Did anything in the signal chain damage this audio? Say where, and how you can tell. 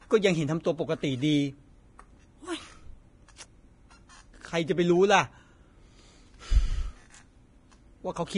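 Yes. The damage sits at the codec stage and runs through the whole speech clip. Nothing survives above 10.6 kHz, and the treble is hissy and grainy, with roughened tones and smeared attacks. The likely cause is heavy Vorbis compression, consistent with roughly 30 kbps.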